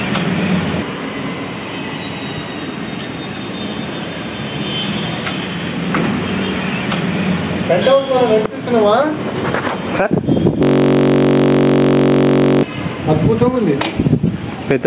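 Right from the start there's gain pumping running through the whole clip, with the level swinging by around ten decibels. Loud and quiet parts end up squashed close together. The likely cause is input gain set far too hot for the microphone, with a fast limiter or compressor clamping down on each peak and then letting go.

At 10.63 s a system hang loop kicks in and runs until 12.63 s. The audio stops moving forward and one tiny 21.33 ms slice repeats exactly, about 47 times a second for those two seconds. Because the slice is so short, it comes across as a steady buzz at roughly 46.9 Hz rather than a stutter. That fits a 1024-sample ring buffer the hardware kept cycling through while the computer or driver was frozen. It all sits inside the call-path band, with nothing above 4 kHz.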